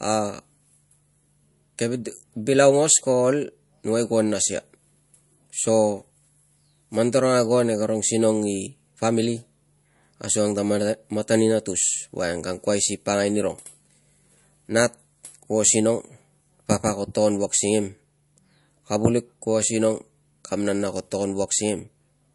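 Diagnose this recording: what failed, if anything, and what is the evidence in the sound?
Codec stage: low-bitrate audio saved at a high bitrate, likely speech first encoded as MP3 around 48 kbit/s and then re-saved far higher. Throughout, a spectrogram shows a hard, flat ceiling at 11.3 kHz; the second encoding cannot restore what the first removed.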